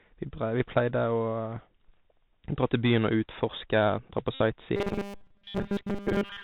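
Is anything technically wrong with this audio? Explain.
Yes, there are three faults.

Throughout the clip, the Bluetooth CVSD headset codec is audibly damaging the speech. The link carries one bit per sample, which fits 64 kbps CVSD. Each bit only nudges the waveform up or down by an adaptive step. The band stops at 4 kHz, so the speech sounds muffled and narrow. Loud high-frequency sounds outrun the step and distort, s sounds turn scratchy, and a granular hiss sits beneath everything.

From 4.34 to 4.41 s, a Bluetooth headset packet is repeated. Packets between headset and phone were lost, about 60 ms of audio, which points to roughly sixteen 3.75 ms packets. The chip kept re-decoding the last good packet's bits in their place. That repetition every 3.75 ms produces a short, steady buzz near 267 Hz that replaces the real sound until good packets resume.

From 4.76 s to the end, the speech takes on the robotic sound of repeated short buffers. 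It becomes a rigid, metallic buzz at 200 Hz that only loosely follows the speech. The likely cause is that new audio arrived too seldom and the software filled the gaps by looping its most recent slice, which fits a 5 ms buffer. Most of that stretch is repetition rather than real audio, and the loop rate imposes its own fixed pitch.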